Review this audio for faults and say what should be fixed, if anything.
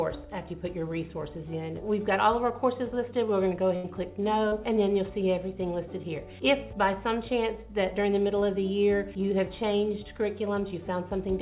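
A burst of packet loss runs from 3.76 to 3.86 s. About 80 ms of audio never arrived in time. The receiver stretched the last sound and faded it down, so it becomes a held buzz or fading hiss before playback jumps ahead.

A short concealed packet loss follows at 4.48 to 4.54 s. Here 40 ms went missing. The decoder extended the preceding sound and blended back into the real signal. The result is a brief smear or wobble, and a short sound may drop out.

Both gaps come from the network, not the codec. The band-limit at 4 kHz fits a G.711 call path at 64 kbps. To prevent this, give the jitter buffer more headroom and add forward error correction or redundancy to cover lost packets.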